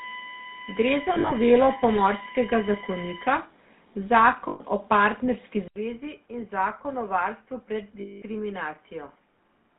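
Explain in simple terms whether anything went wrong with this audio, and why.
GSM full-rate codec, throughout: the speech went through an early mobile-phone codec that rebuilds the voice from a coarse model, so it sounds buzzy and gravelly, with no treble.

USB whine, 0 to 3.35 s: current drawn by a USB connection leaked into the audio, leaving a steady whine at 1 kHz, strongest at 2 kHz.

Lost GSM frames, 1.14 to 1.33 s (in scattered short gaps), 4.48 to 4.61 s and 8.0 to 8.23 s: damaged chunks were patched by repeating the previous sound, which is heard as brief metallic ringing.

Input switched to a poorer device, from 5.68 s: after a short silence, the speech turns quieter, duller and boxier, with nothing above 3.1 kHz, likely because recording moved to a lesser microphone.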